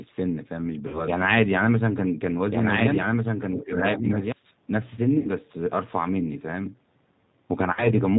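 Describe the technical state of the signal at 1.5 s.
At 1.5 s the speech carries G.729 codec damage throughout. The 8 kbit/s coder rebuilds each 10 ms frame from a vocal-tract filter, a pitch predictor and a few pulses, and discards everything above 4 kHz, so the sound is band-limited, rough and audibly synthetic. A doubled audio track is also under way from the start until 4.32 s. A second full-band copy, roughly 5 dB quieter, trails about one and a half seconds behind with no room colour, likely from a slower capture path.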